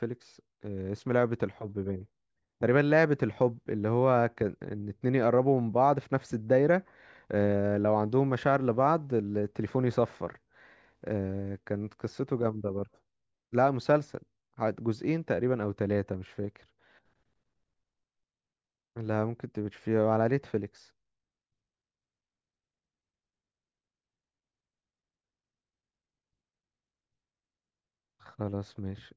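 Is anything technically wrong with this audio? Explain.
No, nothing is technically wrong with this audio.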